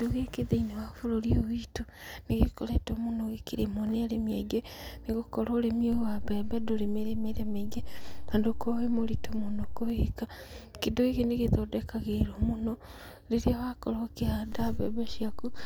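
The waveform's zero line jumps in a DC step of about -31 dBFS from 5.93 to 9.90 s, then about -32 dBFS from 14.52 s onward. Each shift lands as a low thump beneath unchanged speech.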